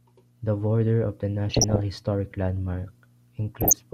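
At 1.50 s, right after "border of the", the speech breaks into DAB burbling until 1.84 s, and again from 3.61 to 3.80 s. Bit errors from weak reception, around one percent and then 0.7 percent, slip past error correction and corrupt MP2 scale factors and samples, so individual sub-bands jump in level frame by frame, matching about fifteen and nine frames. The result is short blips of noise in single sub-bands, unlike the steady swirl of low-bitrate coding or the silent gaps of dropouts.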